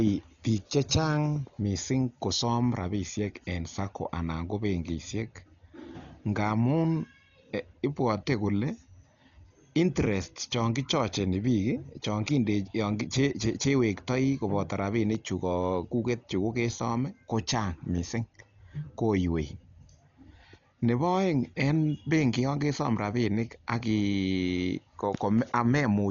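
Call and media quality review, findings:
Dull, band-limited speech throughout, nothing above 7.1 kHz; rough, fluttering noise hugging voiced tones. Likely Dolby Digital compression (AC-3/E-AC-3) at a starved bitrate, which fits roughly 40 kbps: encoder narrows bandwidth, leaves many frequency lines without mantissa bits, decoder fills them with dither noise. Heavy codec damage.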